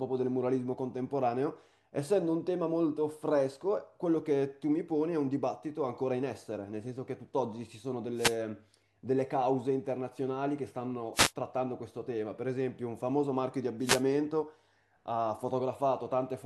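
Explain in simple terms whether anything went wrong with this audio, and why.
Wireless microphone noise hits occur at about 8.15, 11.13 and 13.80 seconds, each a brief burst of static lasting roughly a fifth of a second. The radio link from the microphone faded as reflected signals cancelled, letting receiver hiss swell up over the speech.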